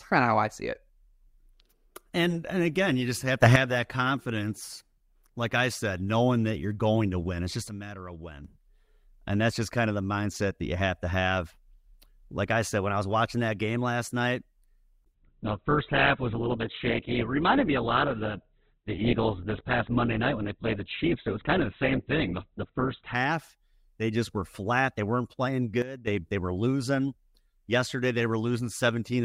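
The clip is speech with two kinds of fault. The first is a sudden gain jump, heard three times. At 3.43 s, between "again you just have" and "that confidence like I", the level leaps up by about 11 dB for 0.13 s. From 7.69 to 8.45 s it drops by about 11 dB. From 25.82 to 26.07 s, between "weren't playing" and "they were losing", it drops by about 12 dB. Each change hits the speech and the background noise together. The likely cause is a digital gain step applied between two samples with no ramp.

The second fault is an adaptive stream at a lower bitrate, from 15.15 to 23.15 s. For these 8 seconds the quality falls abruptly, with no gap. Nothing is left above 4.4 kHz, so the speech turns dull and narrow, and codec artefacts rise. The sound points to the player switching from about 64 kbit/s Opus down to 8 kbit/s Opus while the connection slowed, then switching back.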